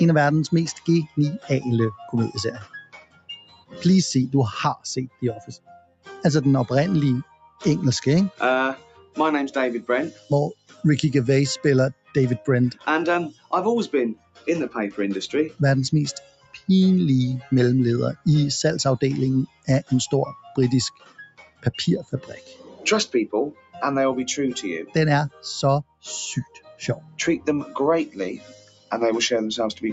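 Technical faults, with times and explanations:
Throughout: noise suppressor applied to music or sounds. A speech-tuned suppressor treats steady tones and tails as noise, so the level swings by around 15 dB and pumps, unlike a fixed gain change.
0.75–3.84 s, 4.76–6.09 s, 7.24–9.17 s, 10.11–10.84 s, 11.93–14.47 s, 15.49–18.26 s, 19.47–23.78 s, 24.86–29.92 s: sound cut by the noise suppressor. Held and decaying sound sinks by about 16 to 21 dB while onsets pass, which is not a hard dropout.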